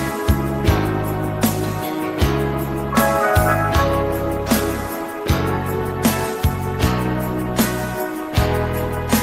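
No technical faults can be heard anywhere in the recording.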